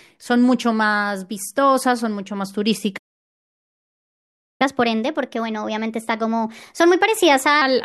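The player was likely starved of data or blocked, producing a playback stall: from 2.97 s to 4.62 s the speech cuts out into silence for about 1.62 s, stopping mid-flow before resuming where it had halted.

To recover the lost time, the player then plays its backlog by resampling, a catch-up at higher speed. From 4.62 s to 7.62 s the speech runs 1.15 times faster and sits roughly two semitones higher, before settling back to normal speed and pitch.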